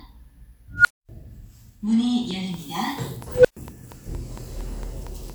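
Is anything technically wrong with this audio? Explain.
Yes, there are two kinds of fault. An unstable filter occurs twice: from 0.75 to 1.09 s a tone near 1.5 kHz swells over about 96 ms, clips, then drops into 240 ms of silence. From 3.32 to 3.57 s a tone near 500 Hz builds over about 122 ms, then goes silent for 120 ms. Bad recursive coefficients make the output grow until it overflows. On a spectrogram each shows as a brightening horizontal line. On the waveform it is a widening envelope that flattens where it clips, then a flat gap.

A train of clicks runs from 2.31 to 5.31 s: around fifteen similar, regularly spaced ticks at 4.35 per second, some about 10 dB above the sound. The likely cause is interference or a faulty connection or power supply. They appear as evenly spaced vertical lines and sharp spikes.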